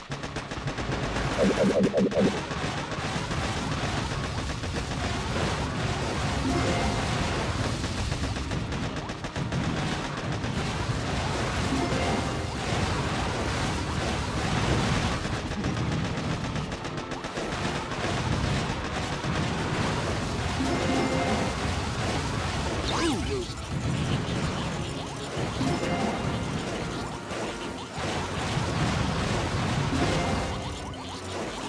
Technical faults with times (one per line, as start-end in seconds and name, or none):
none